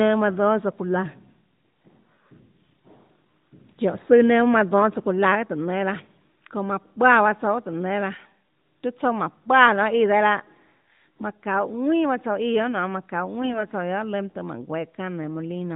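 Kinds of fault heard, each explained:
AMR bit errors: Near the end, from 13.42 to 13.65 s, a short burst of corrupted frames roughens the speech. Some of the less protected bits in each damaged frame arrived flipped, a few in every hundred, but the check on the key bits still passed. The decoder therefore used wrong pulse positions and slightly wrong pitch, gain and spectral values. Pitch and loudness roughly hold, but the sound turns hoarse and gargly, against the narrowband mobile-codec sound of the rest.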